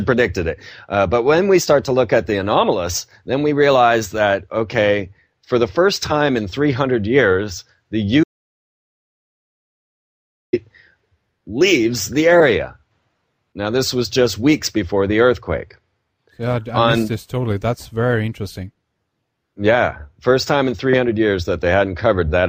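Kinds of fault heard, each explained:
Audio dropout to silence: the sound cuts off abruptly at about 8.24 s and stays silent until it snaps back at 10.53 s, so roughly 2.3 s is simply gone. There's no room tone or hiss under the gap, just silence. That points to the input dropping away while recording carried on, likely a brief disconnect, a broken link or an accidental mute, and whatever happened in that stretch isn't recoverable.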